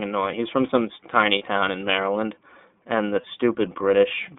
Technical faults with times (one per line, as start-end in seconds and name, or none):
0.00-4.38 iLBC codec
1.38-1.42 lost iLBC frames
3.21-3.25 lost iLBC frames